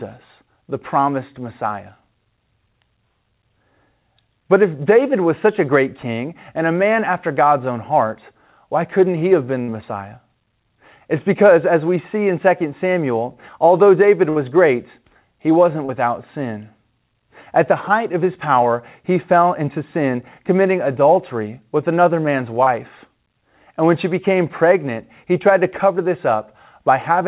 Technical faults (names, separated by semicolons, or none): burst of packet loss; short concealed packet loss